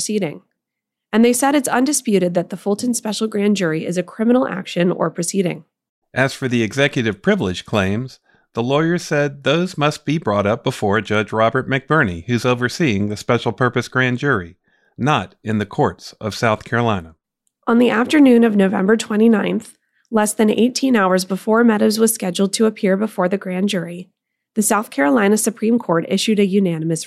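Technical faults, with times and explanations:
No technical faults can be heard anywhere in the speech recording. There is nothing to list against any time in the audio.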